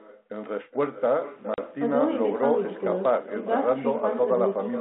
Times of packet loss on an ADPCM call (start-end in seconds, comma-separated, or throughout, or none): 1.54-1.59